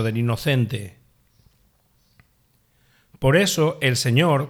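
A block size mismatch (truncated) runs through the whole of this speech clip. A steady buzz at about 43.1 Hz sits under the audio from start to finish, pulsing once per block. That rate fits blocks of 1024 samples at 44.1 kHz. One stage hands over longer blocks than the next stage reads, so the tail of each block is discarded. Each cut leaves a discontinuity, and those cuts repeat to form the buzz. The pace and pitch here stay at normal speed (1.0×).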